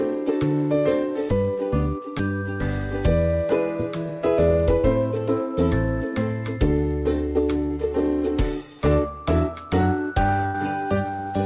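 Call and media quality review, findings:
Short concealed packet loss at 2.18 s, 4.81 s and 7.66 s, each lasting 30 to 60 ms: brief smear or wobble. Probable component is jitter buffer/decoder concealment extrapolating the last sound across the late audio. On a spectrogram, short smooth smudges replace the detail. The waveform shows a continued stretch with a crossfade back.

Burst of packet loss at 10.46 to 10.56 s, about 100 ms: the sound is held, decays, then jumps ahead with content missing. Probable component is network loss across several consecutive packets, with receiver concealment fading out. On a spectrogram, a frozen, dimming band is followed by an abrupt restart. The waveform envelope shows a tapering stretch. Band edge at 4 kHz, consistent with the G.711 mu-law call path.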